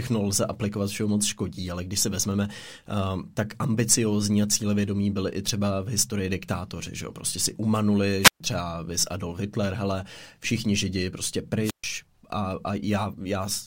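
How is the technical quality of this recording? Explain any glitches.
The speech is marred by two brief dropouts. A wireless microphone squelch dropout occurs at 8.21–8.40 s, just before "třeba vys", and again at 11.62–11.84 s, right after "hele všichni židi prostě". Each time the radio signal fades, static swells, and the receiver's squelch mutes the output for about 130 ms before the speech returns.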